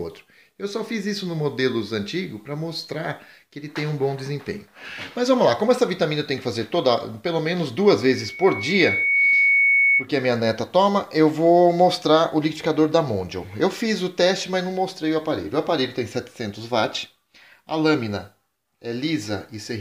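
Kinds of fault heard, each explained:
Loudspeaker feedback squeal: from 8.01 to 10.07 s, loop gain exceeds one at 2.2 kHz, so that tone swells within a second or two to about 5 dB above the sound.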